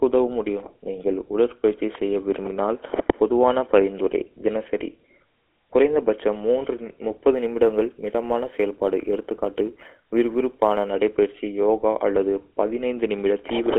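Across the whole clip the speech carries GSM full-rate codec damage. The band is confined to roughly 300 Hz to 3.4 kHz, and the coarse pulse-driven excitation gives a plainly audible buzzy, gravelly roughness. The character fits a 13 kbps GSM full-rate stream.

From 7.33 s to 10.9 s, just before "நடைபயிற்சி யோகா", sample clock jitter sets in. Samples are taken with timing errors of around a microsecond or two, adding a hiss-like roughness roughly 45 dB below the signal. It is most noticeable on louder, brighter speech.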